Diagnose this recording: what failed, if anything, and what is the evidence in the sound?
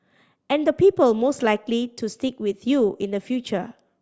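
Nothing failed here as far as I can hear: the speech runs along without any defect to point to at any stage of the chain.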